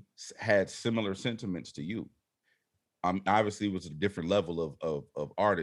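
No technical faults are audible.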